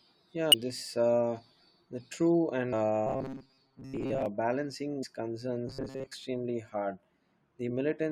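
A brief glitch at 0.52 to 0.54 s, another at 2.72 s just after "uh the true", and a third at 5.02 s are damaged data in a compressed stream: corrupted frames throw the decoder out of sync, and it skips ahead to the next valid header. From 3.07 to 4.26 s and again from 5.67 to 6.15 s the speech turns into a rigid metallic buzz near 134 Hz. This robotic sound likely comes from repeated short buffers of about 7.5 ms filling gaps while most of the real audio is lost.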